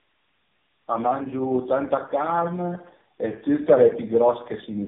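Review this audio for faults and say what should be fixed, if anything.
Tandem speech coding runs throughout: three speech codecs each recode the last one's errors, making it rougher and warblier than any single narrowband codec, with nothing above 3.6 kHz. To prevent it, carry the call end to end in one codec, using transcoder-free operation across network borders.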